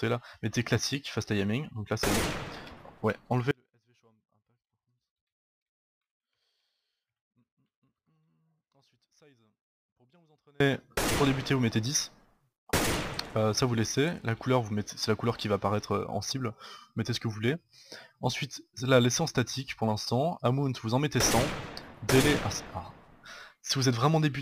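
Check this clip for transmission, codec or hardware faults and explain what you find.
One fault is present: an audio dropout to a faint residue from 3.51 s to 10.60 s. The signal cuts abruptly for about 7.1 s, leaving only a faint leak roughly 40 dB down, likely from a lost upstream feed while the downstream path stayed live.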